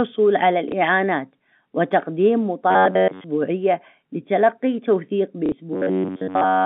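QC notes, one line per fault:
0.69 to 0.72 s, packet loss with last packet repeated: a 30 ms gap, which fits one lost packet, is filled by replaying the previous chunk. The waveform shows a copied segment with a step at each edge.
2.71 to 3.25 s, robotic sound from repeated short buffers: the sound becomes a metallic buzz at 93.8 Hz, likely from a buffer of about 10.7 ms being looped while most of the real audio is skipped. The spectrogram shows rigid, evenly spaced harmonic lines.
5.46 to 5.52 s, packet loss with last packet repeated: a 60 ms gap, consistent with two lost packets, is covered by repeats. It gives a brief stutter, and the waveform shows a duplicated block with discontinuities at the joins.
5.73 to 6.65 s, robotic sound from repeated short buffers: the same 93.8 Hz buzz returns, with essentially all of the real audio replaced by loops, likely of a buffer of about 10.7 ms. 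On the spectrogram the harmonics flatten into fixed horizontal stripes.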